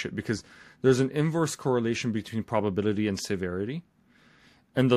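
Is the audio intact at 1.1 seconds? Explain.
Yes, the audio is intact at 1.1 seconds, with no audible fault at that moment.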